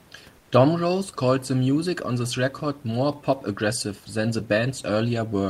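From 0.38 to 0.51 s, the sender likely paused transmission during a speech gap and the receiver filled it with comfort noise in place of the background. For about 130 ms the textured room noise becomes a flat, featureless hiss, about 2 dB quieter.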